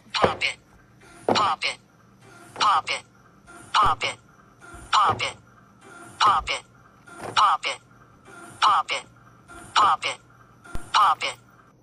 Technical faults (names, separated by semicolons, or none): DC step